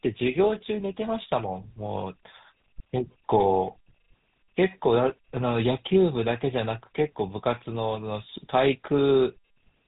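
From start to finish the speech carries the damage of the GSM full-rate codec, which fits its 13 kbps rate. The codec models the vocal tract and excites it with a sparse, regularly spaced pulse train, so voicing takes on a buzzy, gravelly roughness, and nothing above about 3.8 kHz survives. Simple band-limiting would muffle the sound without adding grit. Here the roughness is plainly audible, and that grit marks the codec.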